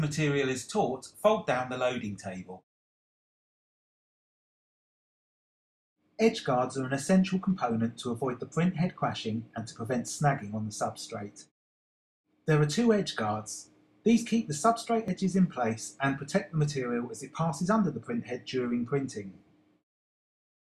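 Two devices in the chain are likely running on separate clocks that disagree by a few hundred parts per million, so the buffer between them drifts until a block of about 70 samples is dropped or repeated. These clock drift buffer slips recur about every 5.0 s, from roughly 0.12 s to 20.08 s, giving about five events. Each slip is heard as a brief click or pop in the sound, arriving at that steady interval.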